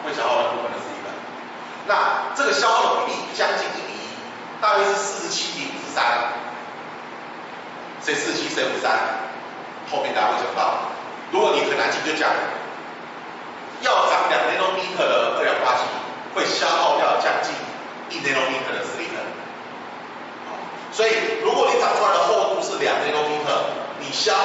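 No technical faults can be heard; the audio carries the ordinary character of a call, with the microphone processing and the WebRTC call path limiting the band to nothing above about 8 kHz.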